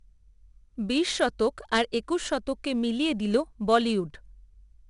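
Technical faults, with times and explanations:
Throughout, 4-bit ADPCM compression: each sample is stored as a coarse 4-bit step from a prediction, so gritty hiss rides on every loud syllable. A spectrogram shows level-following broadband noise and nothing above 10.6 kHz, which fits roughly an 89 kbps stream.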